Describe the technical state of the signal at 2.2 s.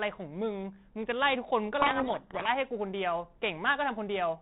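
At 2.2 s the signal is inside a codec payload misread that runs from 1.80 to 2.48 s. The G.726 stream, coded at 32 kbit/s, is being unpacked with the bit order of each code word reversed. The decoder still sees valid-looking values, but the sample differences it rebuilds are wrong. The speech is buried in harsh, grinding distortion across the telephone band below 4 kHz.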